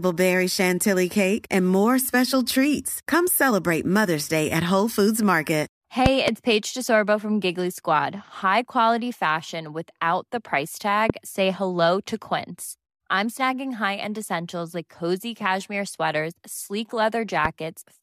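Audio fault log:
6.06–6.30 s, loud pop: Two sharp pops land close together, peaking about 20 dB above the speech. A sudden voltage step, likely from a plug or switch, jolts the signal, and the circuits after it shape the pulse.
11.10–11.12 s, loud pop: One pop, about 20 dB up, right after "fashion without the price". The speech carries on beneath it.
17.45–17.48 s, loud pop: A single pop, about 15 dB up, just after "cozy cashmere sweaters sleek".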